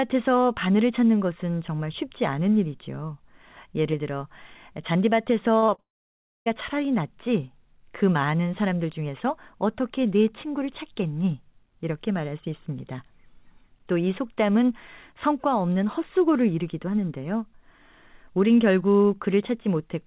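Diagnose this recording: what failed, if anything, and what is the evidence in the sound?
Short concealed packet loss, on the network side: at 5.58, 5.66 and 5.74 s, 20 to 40 ms gaps are patched from the last sound, heard as smears.

A long network dropout follows from 5.80 to 6.48 s. A brief fading fill gives way to silence for most of that 0.66 s, likely because packets never arrived.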